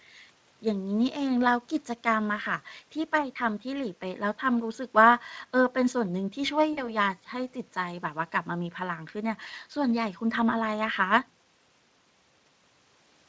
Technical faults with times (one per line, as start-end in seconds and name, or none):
6.73-6.90 VoIP packet loss concealed by the speech codec